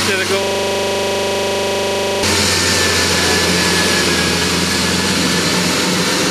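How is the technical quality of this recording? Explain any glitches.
The recording has one serious glitch. From 0.43 s to 2.23 s the sound locks into a rapid, mechanical rattle-buzz, the same 40 ms fragment repeating about 45 times at a steady 25 Hz before normal audio resumes. This is a system hang loop. The computer or its audio driver stalled, and the sound hardware kept replaying the last chunk in its ring buffer until the system recovered.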